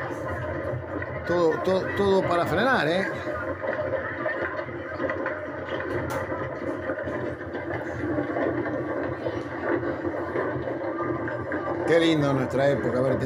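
Nothing audible here needs attention from an engineer.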